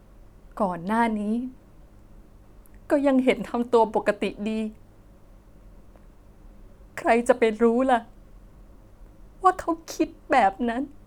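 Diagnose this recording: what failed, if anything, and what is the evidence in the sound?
Nothing failed; no fault is audible in the speech.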